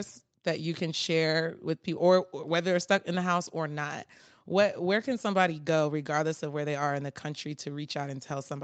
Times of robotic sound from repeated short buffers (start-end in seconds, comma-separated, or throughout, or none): none